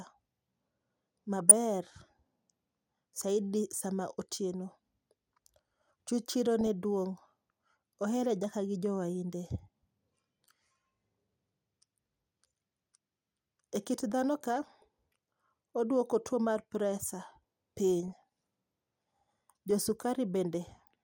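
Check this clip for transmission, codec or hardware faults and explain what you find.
DAB burbling, caused by weak digital radio reception, occurs five times in the speech: 1.40–1.51 s, 4.53 s, 6.61–6.67 s, 14.62–14.82 s and 18.00–18.23 s. Bit errors escaping error correction corrupt MP2 sub-band samples and scale factors, so single bands jump in level for up to a frame. The result is brief blips of noise in single sub-bands.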